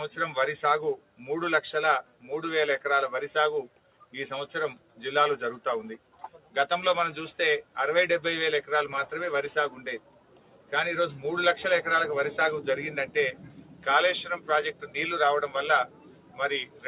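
From the start, a speech-tuned noise suppressor is acting on the sound. It mistakes steady tones and decaying tails for noise. Level swings by roughly 10 dB. Attacks pass, held parts sink, so the sound pumps and thins.

The suppressor also cuts sound hard in six spans: 0.97–2.3 s, 3.68–5.0 s, 5.98–6.56 s, 9.99–10.72 s, 13.07–14.95 s and 15.87–16.85 s. Drops reach about 12 dB. Only parts of each span are hit, around half a second to a second in total. Tails duck and vanish early.

Throughout, the band stops at 4 kHz, which fits a G.711 A-law call codec at 64 kbps.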